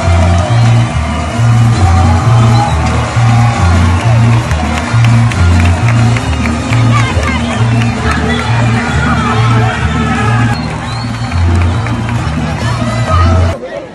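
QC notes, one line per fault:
throughout, hard clipping: a crackly, gritty edge lands on the loudest peaks. The signal is driven about 6 dB past what the stage can pass, so around one percent of samples are cut flat, adding high harmonics.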